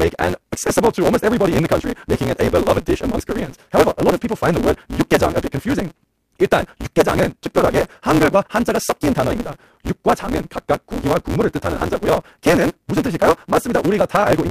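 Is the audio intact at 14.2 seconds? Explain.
No. At 14.2 seconds the speech is affected by a block size mismatch (truncated), which is present throughout the clip. One stage writes blocks longer than the next stage reads, so the tail of every block is discarded. The chopping recurs at about 172 Hz, heard as a steady buzz, which fits a 256-sample read size. With a portion of each block missing, the speech runs about 1.88 times too fast while keeping roughly its normal pitch.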